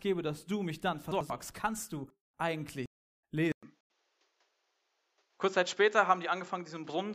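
A jumbled moment runs from 1.12 to 1.30 s. The cause is chunks out of order: a 93 ms block of audio arrived one chunk late and played after the audio meant to follow it. Nothing is lost, but the order is wrong, with hard joins around the misplaced piece.

At 2.86 s the sound cuts out for 371 ms, then resumes roughly 0.4 s further on, fading in rather than starting at full level. This is a stream reconnect: the connection dropped, and a fresh decoder restarted partway through the stream, skipping what was sent during the gap.

From 3.52 s, after a 200 ms gap, the speech turns dull and boxy, with nothing above 7.6 kHz, a level shift of about 5 dB, and a new noise floor roughly 45 dB below the speech. This is likely the input switched to a poorer device.

From 3.62 to 3.90 s a second garbled passage follows, again chunks out of order, this time with a 93 ms block played two chunks late.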